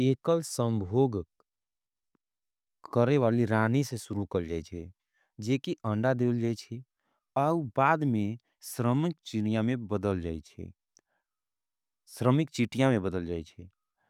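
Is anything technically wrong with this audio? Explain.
No, nothing technically wrong here.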